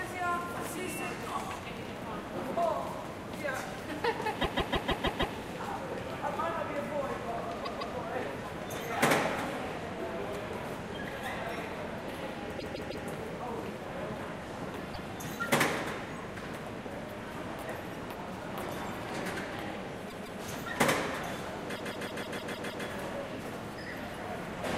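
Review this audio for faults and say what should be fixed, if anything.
Repeated frames at 4.40–5.34 s, 7.62–7.93 s, 12.58–13.05 s, 14.93–15.09 s, 20.08–20.39 s and 21.75–22.85 s. Each time the same 156.7 ms block plays again back to back, with six, two, three, one, two and seven extra plays, so the sound stutters and the clip runs about 3.3 s longer. That block length fits a run of six compressed frames of roughly 26 ms being written or sent more than once.

To prevent it, have the writer or transport check frame sequence numbers or timestamps and drop any frame already delivered, rather than re-emitting buffered frames after a retry or stall.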